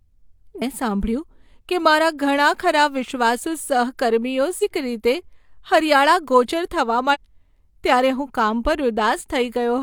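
At 0.58–0.63 s, 4.59–4.64 s (just after "ઘણા ખરાં વિશ્વાસુ સહકર્મીઓ") and 7.10–7.17 s, damaged data in the compressed stream makes the decoder misread frames and hunt for sync. Each is a brief disturbance, heard as a chirp, squawk, click or short hole.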